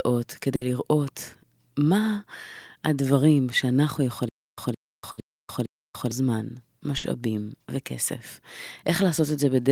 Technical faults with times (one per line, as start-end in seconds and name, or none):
0.55-0.64 burst of packet loss
4.29-6.11 stutter with silent gaps
5.11-5.20 burst of packet loss
6.97-7.06 burst of packet loss